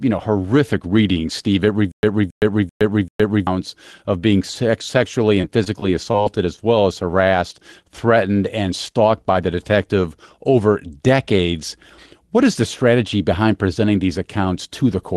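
Speech over a call path whose Opus coding rolls off the top end near 12 kHz, which fits a low bitrate of roughly 20 kbps, with three dropout faults. From 1.92 to 3.47 s, just before "of being", there is a stutter with silent gaps: a 0.27 s fragment plays four times at an even 0.39 s period, each repeat followed by about 0.12 s of dead silence. The likely cause is a stalled player replaying its last buffer on each retry, so the audio meant for that span is lost. From 5.41 to 6.59 s, ending before "well as", repeated packet loss gives a choppy, robotic texture. Several short holes, the longest 19 ms, are bridged by stretching the preceding sound, about 0.11 s of fill in all. Between "threatened and" and "by the detective over", at 8.92 to 8.96 s, a short concealed packet loss patches about 20 ms of missing audio with continuation of the previous sound, heard as a brief smear.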